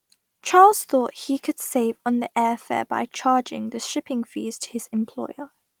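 No technical faults can be heard in this speech.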